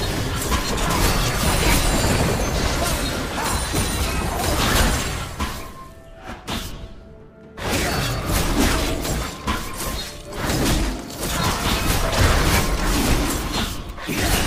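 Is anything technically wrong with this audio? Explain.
Yes. A train of clicks runs from 0.00 to 2.83 s: about thirty evenly spaced pulses at 8.9 per second, peaking about 5 dB above the sound, likely from interference.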